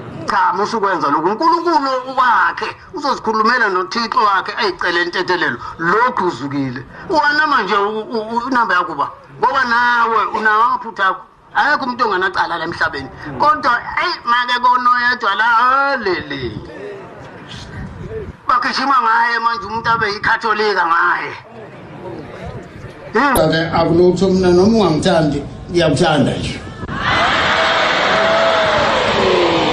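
A compressed frame arrived with flipped bits and the decoder played it anyway, a corrupt frame decoded, at 23.35 to 23.38 s and again at 27.33 to 27.36 s. Each time, a single damaged frame puts energy at wrong frequencies, producing a brief chirp or noise burst.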